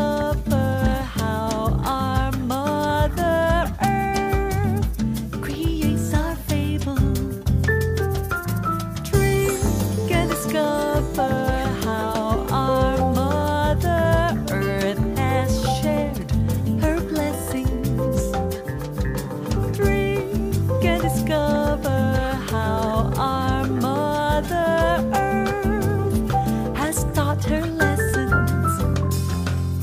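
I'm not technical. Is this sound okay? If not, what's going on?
Yes, nothing here sounds wrong.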